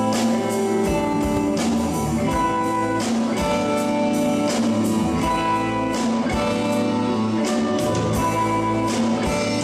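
At 1.37 to 1.39 s there's a single loud pop, a sharp click-thump peaking a few dB above the surrounding sound, which carries on underneath. It's likely a voltage spike from a plug, switch or static discharge getting into the signal chain.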